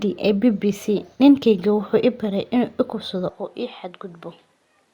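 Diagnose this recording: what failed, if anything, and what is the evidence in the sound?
From 3.29 s, just after "i kufsado", the sound turns duller and drops about 5 dB with no gap. A spectrogram shows energy ending at 13 kHz, the waveform steps down, and a faint new noise floor sits roughly 45 dB below. The input was likely switched to a poorer device at the driver stage.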